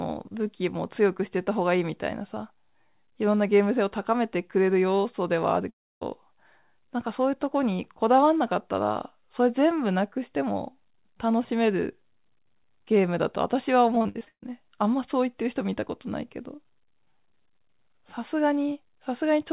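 At 5.70 s the speech stops abruptly in a long network dropout that lasts until about 6.03 s. The receiver first stretches the last fragment of sound into a fading buzz, which then gives way to near-silence for roughly 0.29 s. When the audio resumes, the lost stretch of about 0.32 s is simply gone and is not replayed. This pattern is most likely caused by a burst of packets arriving too late or not at all.

From 13.95 s to 14.44 s there is repeated packet loss, which gives a robotic sound. Short holes follow one another in quick succession, the longest about 137 ms. Each hole is patched by repeating the preceding sound, and concealment accounts for nearly 60 percent of this half-second. The speech turns choppy, with pieces missing. It all sits within the narrow telephone band, with nothing above 4 kHz, which is consistent with a G.711 call codec.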